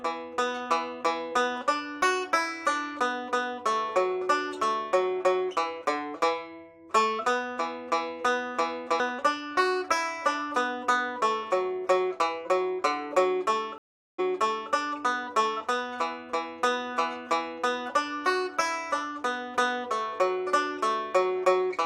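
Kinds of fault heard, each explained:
Stream reconnect: around 13.78 to 14.72 s the connection drops, the output goes silent for about 0.4 s, and a fresh decoder picks the stream up again, resuming about 0.53 s earlier than where it broke off, so a short stretch of sound plays twice. On a waveform this shows as a flat gap followed by a repeated segment. A spectrogram shows a blank vertical band, then a pattern duplicating what came just before the gap.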